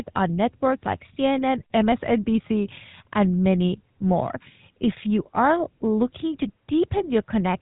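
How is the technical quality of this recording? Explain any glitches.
The speech has plainly audible GSM full-rate codec damage throughout. Nothing above about 3.8 kHz survives. The codec models the vocal tract and drives it with sparse, regular pulses, keeping only some excitation samples. That leaves a buzzy, gravelly roughness, which fits a 13 kbps phone link.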